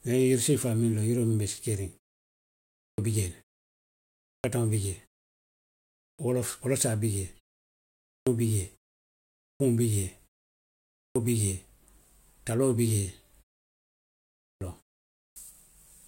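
The output device drops into sleep during each pause and takes roughly a quarter to a third of a second to wake, so speech resumes with its opening sounds clipped away, as at 2.70 s before "bi jee le", then 4.18, 5.90, 7.97, 9.35, 10.86, 14.32 and 15.08 s.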